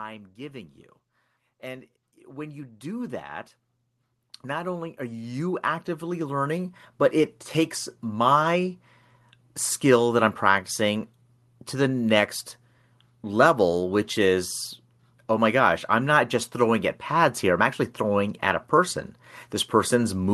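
From 0.36 s to 8.31 s there's automatic gain rising: the gain control decided the input was too quiet and kept pushing it up, about 19 dB in all. Speech and room noise swell together slowly, on top of the call codec's band limit around 12 kHz.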